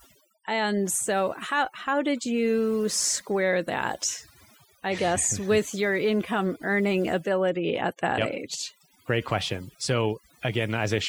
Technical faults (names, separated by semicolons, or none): overdone noise removal